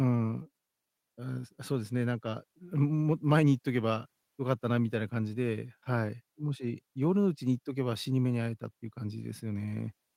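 No technical faults can be heard anywhere in this speech recording. There are no events to place in time and nothing that calls for description.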